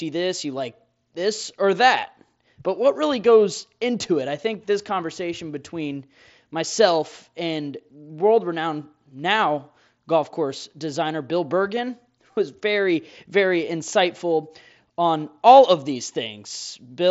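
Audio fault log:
Speech over the mSBC headset link shows no faults.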